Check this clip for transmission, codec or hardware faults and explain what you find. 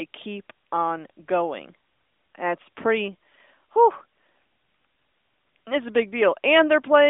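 No transmission, codec or hardware faults turn up in this speech clip. It has passed through an AMR narrowband mobile codec, so nothing reaches above about 3.7 kHz and the band sits roughly between 300 Hz and 3.6 kHz, with only light coding damage that fits the 12.2 kbps mode.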